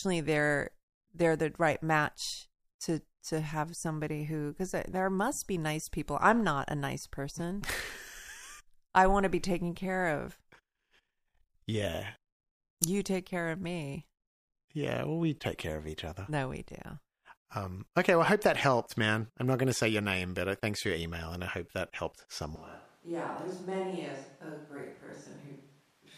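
After "I hope that helped", at 22.56 s, the speech turns hollow, roomy and thin, about 10 dB quieter, with more background noise. This is likely a switch to a distant microphone.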